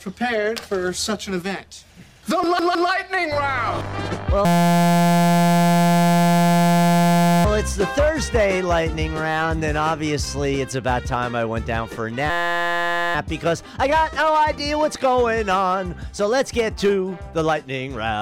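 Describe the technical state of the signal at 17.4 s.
At 17.4 s the signal is intact, with no dropout, distortion or other audible fault at that point.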